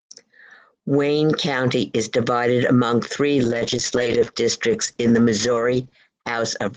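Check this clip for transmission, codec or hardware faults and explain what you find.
One fault stands out. From 3.47 s to the end, a call bitrate drop makes the speech rough and muffled. Starved encoding loses detail, and the cutoff falls from 12 kHz to 8 kHz. This fits roughly 32 kbps falling to 9 kbps for about 2.75 s.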